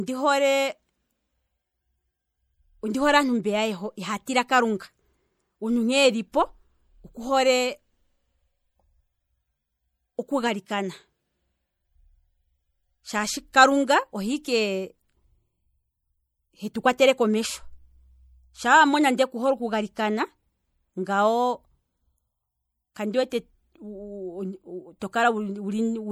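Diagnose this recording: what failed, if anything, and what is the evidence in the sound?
The failure is at the codec stage: MP3 compression is plainly audible across the whole speech clip. The sibilants turn watery, with chirpy, swirling edges, and consonant onsets smear, which fits an encode at around 64 kbps. The encoder likely ran short of bits, switching weak frequency lines on and off between frames. A spectrogram would show speckled, flickering holes in the upper bands.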